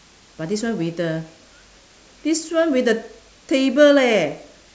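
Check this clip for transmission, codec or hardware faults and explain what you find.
Listening to this speech recording, nothing stood out as a transmission, codec or hardware problem.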